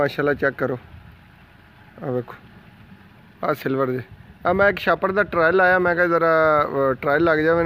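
From 4.44 to 5.67 s, channel delay (comb filtering) appears: one channel runs about a sample late, and summing to mono cancels the top end, with the first notch near 20 kHz. The sound turns slightly dull, and a spectrogram shows a dark band at the very top.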